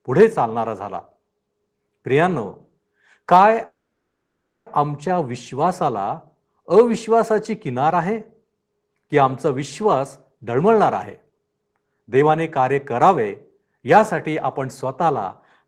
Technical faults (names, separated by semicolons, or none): call audio freeze; jitter buffer speed-up